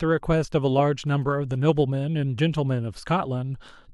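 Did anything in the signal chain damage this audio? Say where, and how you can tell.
Yes. From 1.07 to 1.8 s there's a galloping dit-dit-dit of short buzzes sitting well under the speech, and that's GSM signalling bursts getting into the analogue wiring. A nearby 2G phone was doing its short signalling exchange, and the audio circuit rectified the RF pulses into audio. The giveaway is the buzz pitch: the bursts repeat at about 217 Hz, exactly the GSM frame rhythm.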